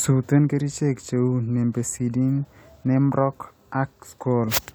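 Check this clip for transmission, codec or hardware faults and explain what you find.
Nothing stood out on listening to this speech recording.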